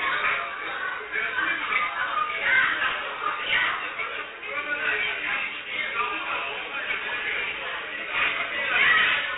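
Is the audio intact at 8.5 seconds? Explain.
No. At 8.5 seconds, as across the whole clip, 4-bit ADPCM compression is audible. Each sample is coded as a coarse 4-bit step from a prediction, consistent with roughly 32 kbps, so gritty hiss rides every loud sound and sharp attacks smear. A spectrogram shows level-following broadband noise and a flat ceiling near 3.9 kHz.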